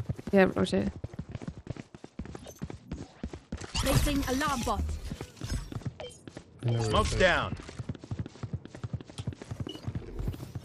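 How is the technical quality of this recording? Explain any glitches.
The recording's quality falls twice, both times from a Bluetooth SBC bit pool drop, at 0.59 to 3.79 s and 5.81 to 9.49 s. Link congestion forced the encoder to spend far fewer bits, consistent with the bit pool falling from 31 to 11, around 83 kbps. The top sub-bands are starved and the rest coarsely quantised, so treble dulls and gritty noise rises until the rate recovers.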